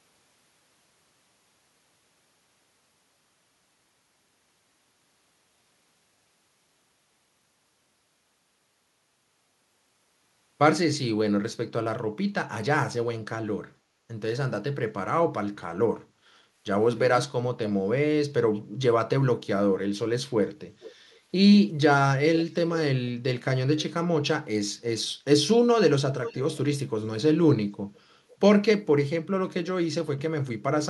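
At 13.79 to 14.03 s, background gated by the echo canceller pulls the room sound down about 6 dB for roughly a fifth of a second, a brief notch in the waveform's noise floor.

Echo leak follows at 20.8, 21.11, 22.38, 26.23, 27.95 and 28.29 s: roughly 490 ms-delayed copies of the speech, about 10 to 35 dB below it, likely residual loudspeaker pickup, visible as ghost spectrogram traces.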